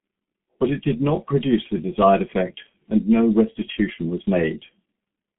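From start to finish the speech carries G.723.1 codec damage, and it is heavy. Nothing reaches above 3.8 kHz, and the line band runs from about 200 Hz to 3.5 kHz, so the sound is muffled and thin. Unlike a plain telephone band-limit, the voice also sounds hoarse and consonants smear together. The codec's slowly updated voice model and long frames, consistent with a stream near 6 kbit/s, cannot follow rapid articulation.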